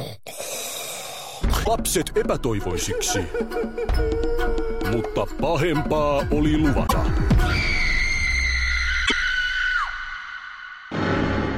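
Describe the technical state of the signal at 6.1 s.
At 6.1 s the signal is intact, with no dropout, distortion, glitch or other fault to be heard.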